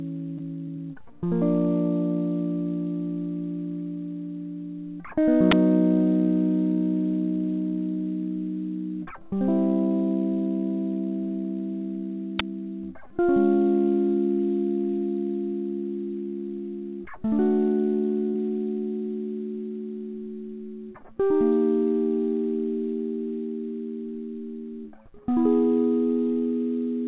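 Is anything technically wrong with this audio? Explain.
Yes. This music clip has three kinds of fault, all heard through a call path whose G.711 mu-law coding leaves nothing above 4 kHz.

From 0.38 to 0.41 s there is a short concealed packet loss. A packet arrived too late for the decoder. The receiver continued the preceding sound for about 10 ms, then blended back. About 20 ms of the music is missing. It is heard as a brief smear.

At 5.51 s and again at 12.39 s there is an uninitialised buffer. Each time, a 10 ms block was played before audio was written into it. Leftover memory was read out as samples. The result is a sudden, loud crack.

From 18.28 to 18.36 s there is a burst of packet loss. Several packets in a row failed to arrive in time. The receiver extended the last sound for about 60 ms and faded it down. The music then resumes further on, with about 60 ms missing.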